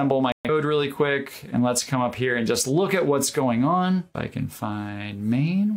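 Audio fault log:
0.32–0.49 s, digital broadcast dropout: the sound cuts abruptly to silence and resumes later in the programme. The receiver muted after frames failed or went missing, discarding about 128 ms of audio, which fits roughly three lost frames, until valid frames returned.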